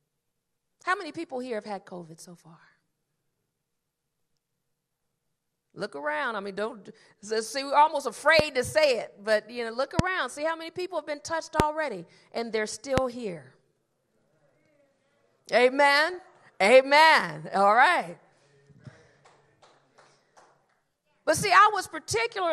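MP2 compression runs through the whole clip. The dull, gurgling, granular texture and the upper bands that flicker in and out fit MPEG Layer II at about 80 kbps, which likely starves the higher of its 32 sub-bands of bits.

DAB burbling appears at 1.15 s and again from 16.10 to 16.19 s. Bit errors from weak reception slip past error correction and corrupt samples and scale factors, so single sub-bands jump in level.

Loud pops occur at 8.39–8.42, 9.99–10.01, 11.60–11.62 and 12.98–13.00 s, each a single sharp pulse about 20 dB above the sound, about 25 dB at 11.60 s. They were likely caused by a switch, plug or static discharge.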